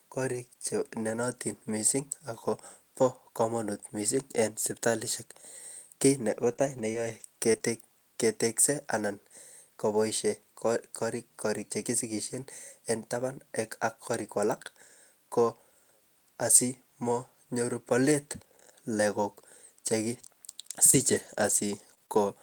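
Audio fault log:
6.49–7.63 s and 20.91–22.18 s, scattered short gaps: about five and then three brief dropouts, the longest near 20 ms, 80 ms and 60 ms missing in total, bridged by extending the preceding sound before "ketekse an", heard as ticks and smears; spectrograms show thin smeared vertical slivers, waveforms small repeated-cycle patches.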